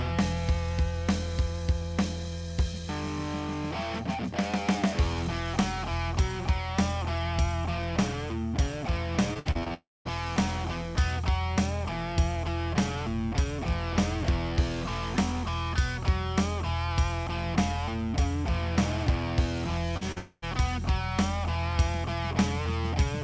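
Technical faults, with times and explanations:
9.34–9.72 s, repeated packet loss (robotic sound): the audio turns choppy, breaking up five times in under half a second. Each hole, the longest about 59 ms, is patched by stretching the last bit of sound, so roughly 39% of this span is synthetic continuation rather than real audio. The holes come too close together for the receiver to recover between them, which gives the choppy, stuttering quality.
9.74–10.07 s, long network dropout: right after the choppy patch, the sound smears into a fading buzz and then falls to silence for about 0.23 s before resuming. Roughly 0.32 s of audio is missing and never comes back. This is likely a network outage, with the receiver extending the last sound until it had nothing left to continue.
19.97–20.04 s and 20.12–20.18 s, short concealed packet loss: two brief smears, each replacing about 40 ms of audio. 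The receiver filled each gap by carrying the preceding sound forward and then blending back into the real signal. The first repair runs slightly long, stretching the passage by about 10 ms.
20.18–20.44 s, long network dropout: immediately after the second smear, the sound decays into a short fading tail and about 0.05 s of silence, with roughly 0.24 s lost entirely. This is likely another network outage, concealed by extending the last sound. The audio resumes without the missing piece, and like the rest of the clip it has no content above 8 kHz, consistent with the G.722 call codec.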